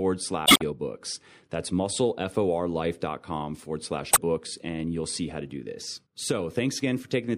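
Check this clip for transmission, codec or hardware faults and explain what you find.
Two spots of damaged data in a compressed stream show up in this speech. The first runs from about 0.43 to 0.62 s, and the second from 4.10 to 4.18 s, right after "forward slash" and before "and you'll see how". In both, some of the encoded bytes got corrupted, so the decoder misread those frames, lost sync and had to hunt for the next valid frame header. What you hear is a short glitch in place of clean audio.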